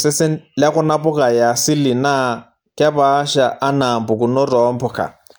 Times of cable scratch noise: none

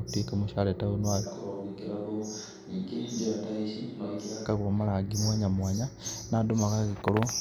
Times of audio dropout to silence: none

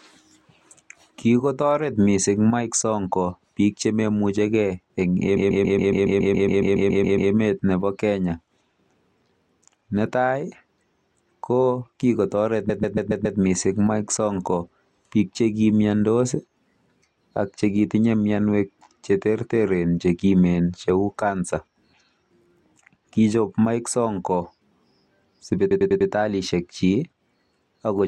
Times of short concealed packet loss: none

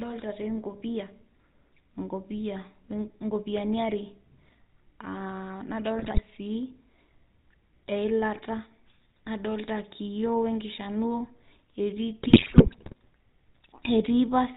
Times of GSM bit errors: 5.99-6.21, 12.22-12.93

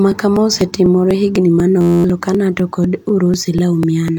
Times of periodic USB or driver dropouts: 0.12-4.08

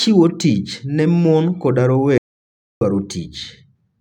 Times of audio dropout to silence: 2.18-2.81

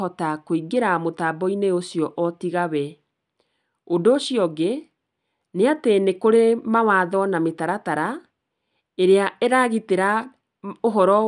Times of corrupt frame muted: none

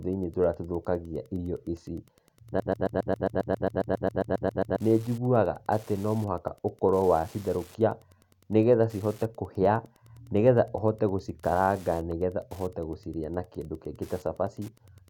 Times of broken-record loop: 2.60-4.80

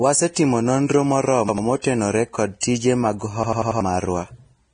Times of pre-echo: 1.81-1.84, 2.60-2.63

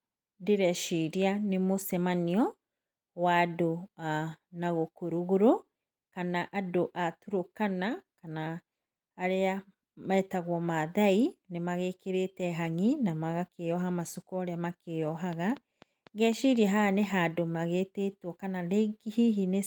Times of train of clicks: 15.33-17.05

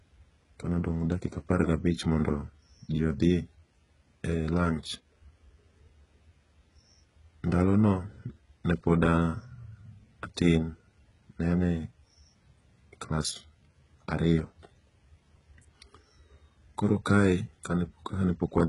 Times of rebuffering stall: none

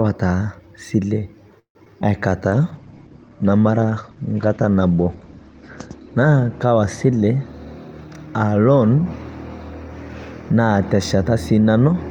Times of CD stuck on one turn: none

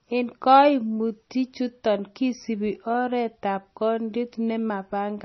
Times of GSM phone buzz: none

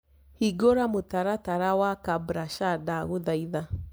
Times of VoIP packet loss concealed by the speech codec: none

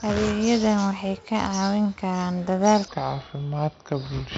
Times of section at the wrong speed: 2.88-4.37

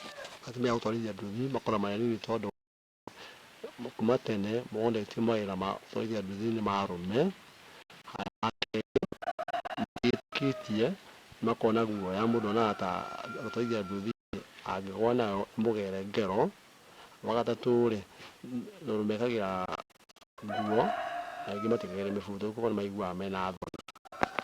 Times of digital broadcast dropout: 2.50-3.08, 7.82-10.33, 14.11-14.34, 19.66-20.38, 23.57-24.22

